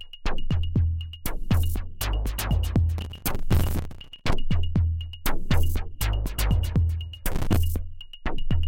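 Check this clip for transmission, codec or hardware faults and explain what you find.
Processor overload crackle appears twice, from 2.98 to 4.33 s and again, more briefly, from 7.32 to 7.56 s. The processor fell behind its audio deadlines repeatedly, and each missed buffer was filled with a short stretch of old audio with hard edges. The rate of the grit suggests buffers of around 5 ms, with roughly a hundred misses in the first burst and about twenty in the second. The sound is a gritty, tearing crackle over the audio that stops once the load eases.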